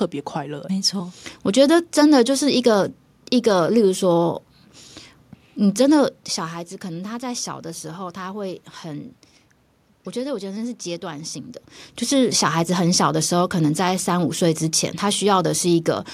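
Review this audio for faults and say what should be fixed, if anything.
Nothing stood out on listening, so there is nothing here that needs fixing.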